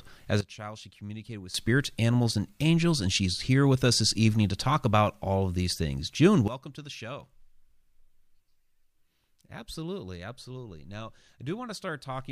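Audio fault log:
0.41–1.54 s and 6.48 s to the end, sudden gain jump: a gain change was likely applied in one step with no ramp, so the speech and its background noise drop together by about 16 dB, then about 15 dB, each switch abrupt and possibly clicking.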